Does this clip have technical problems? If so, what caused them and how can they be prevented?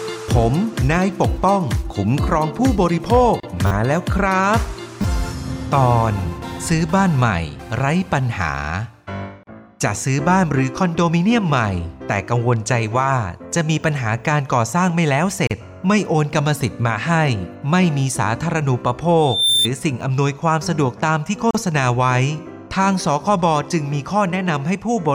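Yes, there are three kinds of fault.

Gap at a join of encoded pieces: the audio was encoded in separate pieces and joined without trimming, so each encoder's start-up delay and final-frame padding stayed in as silence. Continuous sound drops out briefly at 3.40, 9.43, 15.47 and 21.51 s, once every 6 s. The holes last 33 to 37 ms, with smeared edges, and the sound then resumes where it stopped. To prevent this, encode the material as one stream, or trim the encoder delay and padding from each piece before joining.

Repeated buffer: new audio did not reach the playback device in time, so it replayed its last buffer. A short piece repeats with hard joins, heard as a brief buzzy stutter at 3.67 s (four extra plays) and at 5.02 s (two extra plays). The repeat length fits a 10 ms buffer, and some tens of milliseconds of real audio are lost at each point. To prevent this, use larger buffers or reduce load on the audio thread so that data always arrives before the device needs it.

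Loudspeaker feedback squeal: a microphone was picking up the loudspeaker it fed, and at 3.6 kHz the loop gain went above one. From 19.20 to 19.68 s a single 3.6 kHz tone swells over roughly a third of a second and sits a few decibels above the rest of the sound before it stops. To prevent this, lower the loop gain by moving the microphone away from the speaker, cutting 3.6 kHz with a notch filter, or reducing the monitor level.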